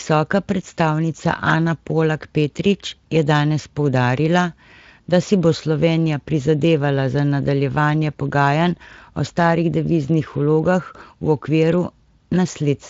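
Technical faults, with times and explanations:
Nothing stood out as a technical fault on listening to this speech clip.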